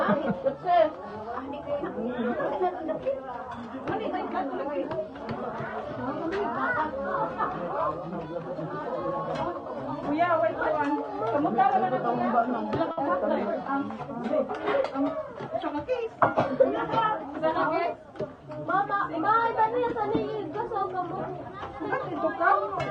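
At 12.91 s a short stall from a late packet begins, lasting until 13.00 s. A packet arrived late and the jitter buffer emptied. The receiver held the last sound for about 60 ms and then resumed where it had stopped. Nothing is lost. The sound drags briefly, with a slight buzz or dip.

From 15.51 to 16.17 s comes a jitter buffer speed-up. The buffer had built up extra delay, so the receiver cut out short pitch-length pieces in quick succession, around 40 ms in total. Playback runs at 106% with unchanged pitch. It sounds briefly hurried.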